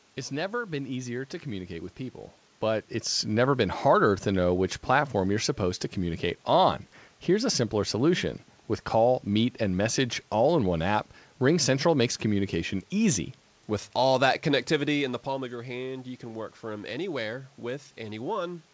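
Nothing stood out on listening to this recording.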